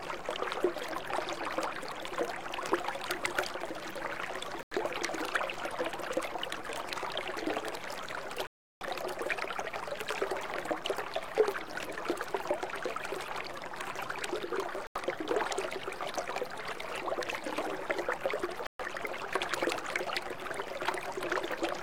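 At 4.63 s, 8.47 s, 14.87 s and 18.67 s the sound drops to silence and then returns. These are digital broadcast dropouts: the receiver stopped getting decodable frames and muted until good data arrived. The gaps last about 0.13 s, 0.38 s, 0.14 s and 0.17 s, with the longest near 8.5 s. Unlike a stall or buffer underrun, the material resumes further on, not where it stopped. What was broadcast during each gap is simply gone.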